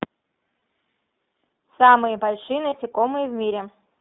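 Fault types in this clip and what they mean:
iLBC codec: narrowband VoIP coding caps everything near 3.7 kHz and cuts the bottom below 150 Hz, so the speech sounds clearly rough and a bit synthetic throughout.
Lost iLBC frames: dropped packets get patched by repeating the last pitch cycle with noise, giving brief buzzy held vowels, about 60 ms at 0.56 s and 20 ms at 2.7 s.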